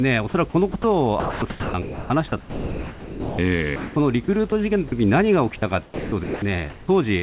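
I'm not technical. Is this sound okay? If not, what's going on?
No, there are a few problems, most of them typical of a call.

First, there's mains hum from the start until about 5.3 seconds: a steady low drone at 50 Hz sitting under the speech. It's the power supply leaking into the audio, usually through a grounding problem or a transformer near the microphone or cabling. It stops around 5.3 seconds, so from there on the drone is gone.

Second, the speech is chopped by the voice detector in several places: 0.72 to 0.84 seconds, 1.2 to 2.1, 4.24 to 4.52, and 5.58 to 6.42. In each stretch, bits of the speech flicker out and are patched with a soft hiss, so it sounds choppy. The likely cause is the sending end's speech detector switching on and off, deciding some quieter parts weren't worth sending.

Third, in other spots the speech is dropped by the voice detector altogether: from 2.4 to 3.38 seconds, which is the longest gap, then 3.76 to 3.96, and briefly at 4.88 to 4.92. 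There the speech gives way to plain steady hiss until it kicks back in. The likely reason is that the detector mistook quiet speech for background and simply stopped sending for a moment.

Finally, from 6.7 to 6.88 seconds you get comfort noise in place of the background: the real room sound is swapped for a smooth, featureless hiss, a touch quieter than the room. That's likely the call deliberately pausing transmission during silence and the receiving end filling the gap with synthetic noise.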